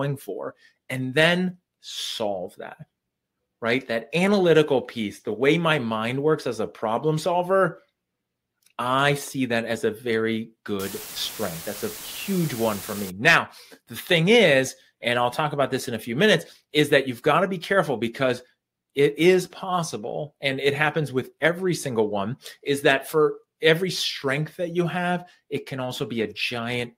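From 10.79 to 13.10 s the audio drops into a steady, even hiss with no crunch or distortion. That's low bit depth with dither: the signal gets rounded to very few levels, which fits roughly 6 bits, with noise added first, leaving white noise only about 15 dB under the sound.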